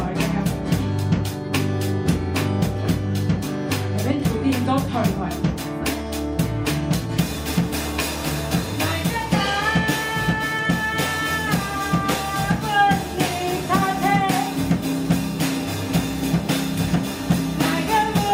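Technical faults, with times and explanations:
No technical faults can be heard anywhere in the audio.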